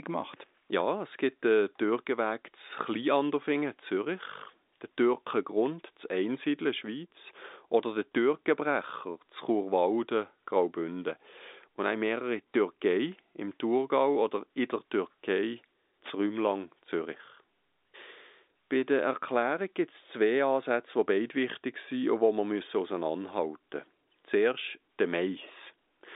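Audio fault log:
No faults found in this clip.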